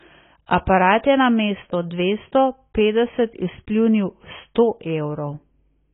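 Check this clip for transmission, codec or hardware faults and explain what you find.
One codec fault is present throughout the speech: low-bitrate audio saved at a high bitrate. Nothing sounds above 3.8 kHz, leaving it dull and smeared, likely a very low-bitrate AAC encode re-saved as high-bitrate MP3.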